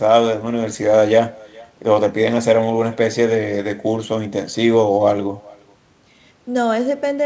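From start to finish the speech carries echo with no canceller: a faint copy, about 27 dB below the direct sound and trailing it by about 0.4 s, shadows the talker's speech. The far end's loudspeaker feeds its microphone and nothing subtracts it, so the talker's own sound rides back across the network. Unlike room reverberation, which smears continuously into the tail, this is a distinct, delayed repeat, band-limited to 8 kHz like the call's G.722 path.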